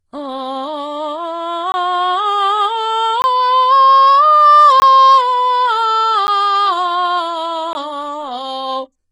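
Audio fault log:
Throughout: HE-AAC compression, likely, heavy damage. Treble is rebuilt from copied lower bands and nothing survives above 11 kHz, so cymbals sound gritty and metallic. Fits a bitrate around 12 kbps.
1.72, 3.22, 4.8, 6.27, 7.73 s: block of digital silence. The music drops out for about 20 ms each time (10 ms at 6.27 s) with no fade, so the short gap at 6.27 s is heard as a tick rather than silence.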